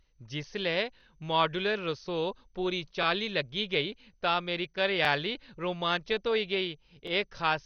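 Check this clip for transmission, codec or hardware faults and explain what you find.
Two faults are present: coarse codec damage across the whole speech clip, and a repeated stutter at regular joins.

MP2 compression, throughout: the speech was likely squeezed through MPEG Layer II at a low rate, around 48 kbps. Starved of bits, the encoder shuts off upper sub-bands, leaving nothing above 6.5 kHz, and the remaining bands are crudely quantised, giving a dull, gurgling, grainy texture.

Overlapping chunks, at 1.01–1.03, 3.03–3.05, 5.05–5.07 and 7.07–7.10 s: the audio was handled in 2-second blocks, each starting slightly before the previous one ended. The 23 ms at every join plays twice, producing a brief click or stutter every two seconds.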